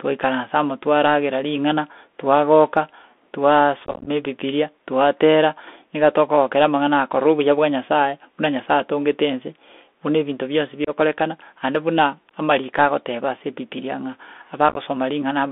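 A speech recording carried over a Bluetooth CVSD headset codec. The sound is confined to about 250 Hz to 3.5 kHz, which fits a 64 kbps CVSD link. Its one-bit adaptive steps cannot keep up with loud high sounds, so sibilants turn scratchy, and a granular hiss sits under the speech. Unconcealed Bluetooth headset packet loss then cuts holes in the audio. From 3.85 to 4.08 s, about 128 ms of sound vanishes in scattered gaps, the longest about 19 ms. The result is a rough, chopped crackle that points to around thirty lost packets. A single hard-edged dropout of about 26 ms falls at 10.85 to 10.90 s. Another chopped stretch, losing about 49 ms, runs from 14.69 to 14.78 s.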